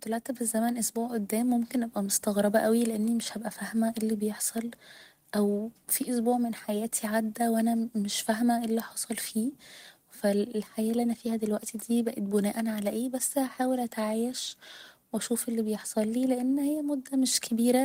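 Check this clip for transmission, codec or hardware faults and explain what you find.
Nothing wrong turns up anywhere in this speech recording, so there's nothing to flag.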